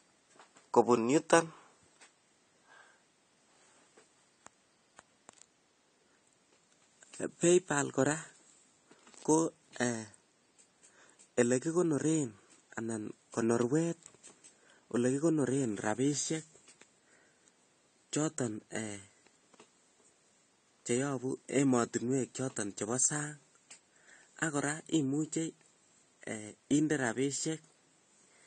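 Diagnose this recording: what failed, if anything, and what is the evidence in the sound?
AAC compression damage runs through the whole speech clip, at the codec stage. Nothing is heard above 9 kHz, and sibilants turn fizzy and smeared. The likely cause is low-bitrate AAC-LC coding, around 32 kbps, quantising frequency lines coarsely and discarding the top band.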